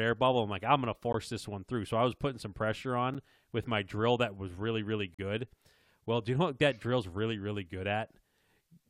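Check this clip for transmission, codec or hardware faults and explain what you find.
Three brief dropouts in this speech point to a gap between stream segments: at 1.13 s after "I'm like I'm gonna" (16 ms), at 3.14 s after "was putting some pressure" (7.3 ms), and at 5.14–5.19 s after "that was really really" (43 ms). They fall about 2 s apart, which fits 2-second segments whose timestamps leave a small hole that the player pads with silence. Each is a hard-edged gap; no audio is lost.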